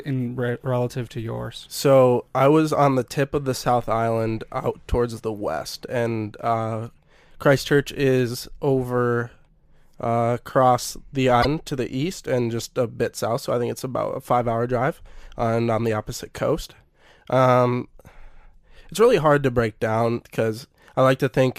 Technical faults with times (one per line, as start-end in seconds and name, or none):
0.00-21.59 sample clock jitter
11.39-11.45 damaged data in a compressed stream